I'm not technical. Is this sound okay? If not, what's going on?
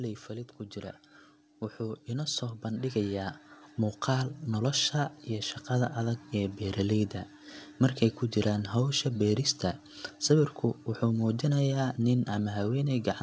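No. From 1.77 to 3.41 s there is automatic gain rising: the call's volume control judged the input too quiet and slowly turned it up. The voice and the background swell together, which is how it differs from someone simply moving closer.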